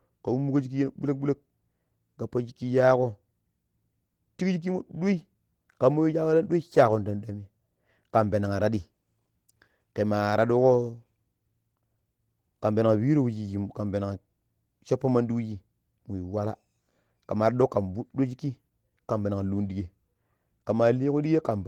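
Throughout, Opus voice compression at a rate fitting about 16 kbps codes the speech's excitation coarsely, so the speech sounds plainly hoarse and slightly robotic.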